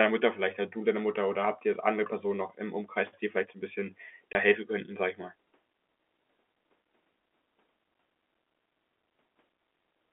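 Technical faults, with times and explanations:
4.33–4.35 s: packet loss filled with silence. A 20 ms hole of dead silence, which fits two lost 10 ms packets.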